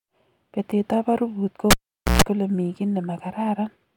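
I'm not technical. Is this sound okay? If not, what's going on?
No. A cable pulled and plugged in, 1.71 to 2.22 s after "ab arubut": pop, half-second silence, brief 60 Hz hum, pop. The hum sets it apart from a plain dropout.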